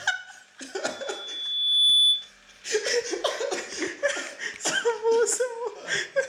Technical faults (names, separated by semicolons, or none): loudspeaker feedback squeal